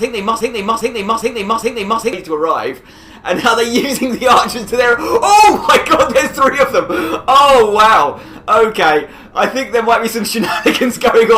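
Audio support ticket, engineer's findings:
Broken-record loop, 0.00 to 2.13 s. Already looping when the clip opens. A fragment of about 0.41 s repeats back to back, 4 times, identical each pass. Probable component: player, encoder or stream stage. Likely a stall, with the last buffered fragment resent instead of new audio. Content for that span is lost, not delayed. Normal playback resumes at 2.13 s.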